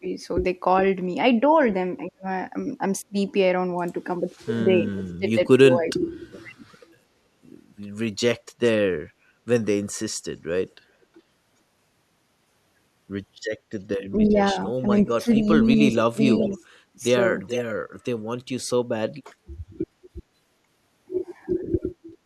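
The speech dips sharply or drops out in pieces at 0.00 to 0.06 s, 2.08 to 3.15 s, 4.18 to 6.63 s and 14.12 to 17.0 s. Levels fall by about 20 to 35 dB, deepest near 2–3 s, and the third stretch loses well over a second of sound in total. This is speech suppressed in double talk, likely caused by an echo canceller that could not tell this side's own talk from the far side's loudspeaker echo and turned everything down.

Within and just after that last stretch, a faint delayed copy of the speech trails the original by about 420 ms, from 14.27 to 15.01 s at about 20 dB below the speech, then louder, about 10 dB down, at 15.93 to 16.55 s and 17.47 to 17.62 s. This is echo leak: one side was likely playing the call on a loudspeaker, and its canceller let part of the microphone pickup return.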